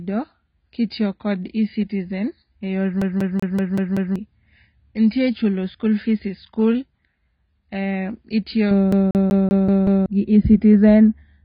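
Speech runs throughout with heavy codec damage: nothing is present above 5 kHz, and the sound is dull and smeared, with a warbling, fizzy texture on sibilants. The likely cause is AAC compression at a very low rate, consistent with an AAC-LC stream of around 16 kbps. Twice, from 3.02 to 4.16 s and again from 8.92 to 10.06 s, the audio falls into a fast, even stutter: a 190 ms fragment plays six times in succession, with a brief mute at each jump. This is a CD stuck on one turn, where a scratch throws the laser back to the same spot on every revolution. From 8.71 s to the end, de-emphasis is applied wrongly. A treble cut intended to reverse pre-emphasis acts on audio that never had it, tilting the response down smoothly to about 11 dB lower at 10 kHz than at 1 kHz and leaving that section dull and muffled.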